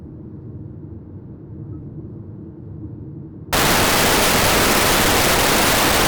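At 3.53 s the reader starts assembling each sample from the wrong bytes. It is misaligned or has the byte order swapped, so the rapidly changing low-order bits land in the most significant positions. From that point to the end of the clip at 6.08 s, the everyday sounds are buried under loud, harsh broadband noise, close to white on the louder sounds.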